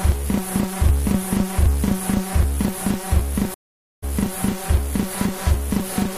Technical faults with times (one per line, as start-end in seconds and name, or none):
3.54-4.04 stream reconnect